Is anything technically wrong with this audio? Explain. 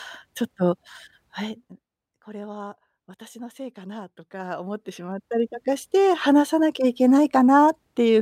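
Yes. The speech has zipper noise in two places. From 1.36 to 1.88 s the level drops by roughly 20 dB. From 4.2 to 5.6 s it rises by about the same amount. Each change moves in 1 dB steps, around thirty per second, with no smoothing between them. Every jump makes a tiny click. The clicks run together into a fast ticking that rides on the speech while the level moves.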